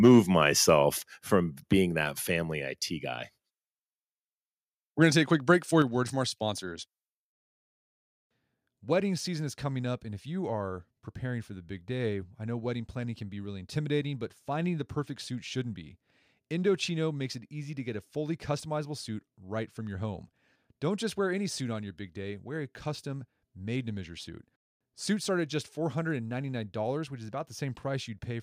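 The microphone input was likely set too high at the very start, driving the converter about 2 dB past its ceiling from 0.04 to 0.2 s. This is microphone overload. The tops of the loudest peaks are sheared flat, affecting around 7 percent of the samples in that stretch, and the opening sound takes on a harsh, crackly edge.

Soon after, the call software likely reacted to that clipping by cutting the device's input gain in a single step. This is microphone volume stepped down, and it happens at 1.02 s, just before "from being". Voice and background both fall abruptly by about 4 dB. A second, larger step of about 6 dB follows at 5.82 s, between "a quick break for" and "a word from our". Again the whole level sinks at once instead of fading.

From 25.02 to 26.66 s, between "made to measure suit" and "which is", the converter's sample clock wanders by roughly a microsecond. This is sample clock jitter. 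Each sample lands slightly early or late, and the error is largest where the waveform changes fastest. The result is a faint hiss or grain, about 40 dB below the signal, that rides on the louder and brighter parts of the audio and disappears in the gaps.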